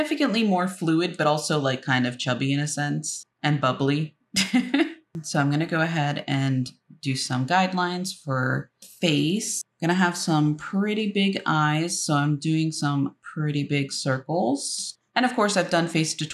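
From 0.12 s to 16.33 s, faint ticks recur at a steady pace. They arrive about every 0.15 s, so roughly a hundred across the clip. These are clock slip clicks. The likely cause is two devices running on separate, unmatched clocks. One sample is dropped or repeated each time the drift adds up to a whole sample. That rate fits a clock error of around 150 ppm.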